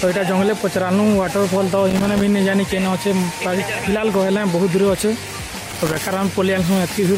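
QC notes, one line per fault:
1.90–2.21 s and 5.71–5.98 s: loose connector crackle, two irregular bursts of scratchy crackle lasting about 0.3 s each. A worn or dirty contact is intermittently breaking the signal path, chopping the audio, and any DC present on the line turns each break into a pop.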